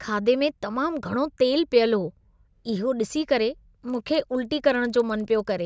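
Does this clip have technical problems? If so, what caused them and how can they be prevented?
Yes. From 3.85 s to the end of the clip, the speech carries a regular ticking at 20 Hz, heard as a buzz that is present only while there is signal. This is a resampler restarted on every block. The 48 kHz to 16 kHz conversion was run on 50 ms blocks independently, so the filter lost its history at each boundary and left a small error every 50 ms. To prevent it, keep one stateful resampler running across the whole stream and carry its filter state between blocks.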